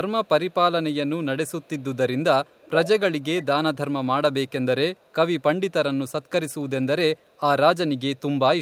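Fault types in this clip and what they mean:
Echo leak: a copy of the speech, about 15 to 40 dB below it, returns 438 ms late in eight short scraps, strongest between 2.45 and 3.76 s, likely loudspeaker pickup the far-end echo canceller missed. Spectrograms show weak duplicate harmonic traces trailing the originals; waveforms show small delayed bursts.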